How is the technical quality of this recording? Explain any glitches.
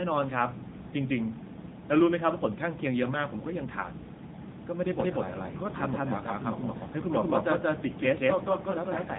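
The quality is poor: narrowband codec damage throughout, plus a doubled track later on.

AMR narrowband mobile codec: the whole clip is cut off above 3.8 kHz. Speech sounds buzzy and synthetic, which fits a low AMR-NB rate near 8 kbps.

Doubled audio track: from 5.00 s to the end, a second full-band copy follows roughly 200 ms behind at about equal level. It starts abruptly, likely from an out-of-step edit.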